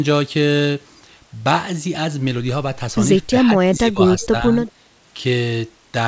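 From 3.68 to 4.00 s and again from 4.20 to 4.43 s, the speech dips by as much as about 20 dB in brief patches, likely speech suppressed in double talk as the echo canceller ducked both sides. At 4.67 to 4.71 s a faint scrap of the voice returns about 30 dB down, 348 ms late, likely an echo leak from a far-end loudspeaker.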